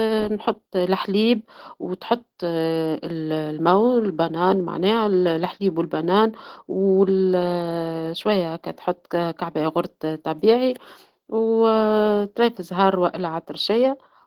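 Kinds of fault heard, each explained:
Opus voice compression: hybrid Opus coding at a rate fitting 16 kbps codes the excitation coarsely, so the full-band speech sounds plainly hoarse and slightly robotic.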